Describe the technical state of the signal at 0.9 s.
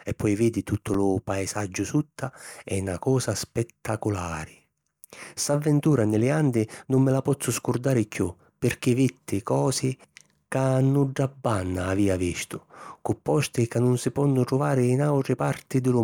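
At 0.9 s the processor is falling behind on its tiny audio buffers, each only a millisecond or two long. It misses a handful in a row and fills the gaps with stale audio, producing a gritty processor overload crackle from 0.67 to 0.94 s, between "e poi vidi" and "lu paesaggiu sutta è".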